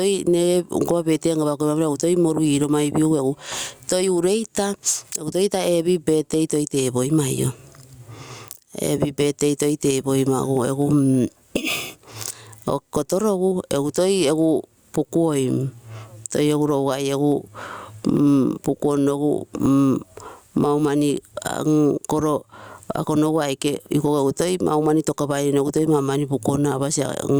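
The level ducks about 20 dB under loud speech: gain pumping, likely from excessive gain feeding a fast limiter.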